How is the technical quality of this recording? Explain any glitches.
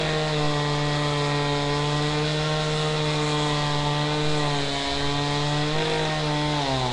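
The technical quality is poor, with plainly audible codec damage running the full length. Throughout, a rough, hissy halo and smeared, underwater character point to likely Nellymoser compression, whose coarse block coding fills starved bands with noise, fitting a 44 kbps stream; nothing is present above 10.6 kHz.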